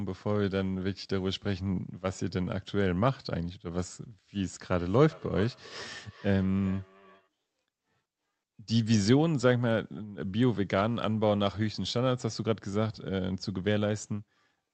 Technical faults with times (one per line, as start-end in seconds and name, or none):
4.33-7.29 feedback echo between two devices